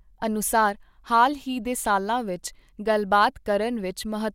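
No technical faults can be heard in the speech, so there are none to describe in time order.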